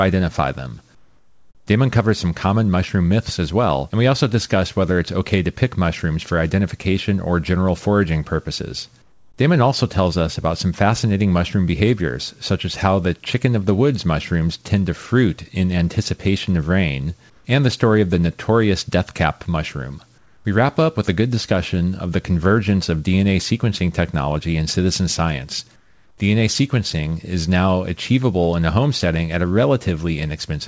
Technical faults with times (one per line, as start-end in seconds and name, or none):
0.95-1.67 comfort noise in place of the background
9.02-9.38 comfort noise in place of the background
17.30-17.45 comfort noise in place of the background
20.18-20.45 comfort noise in place of the background
25.76-26.18 comfort noise in place of the background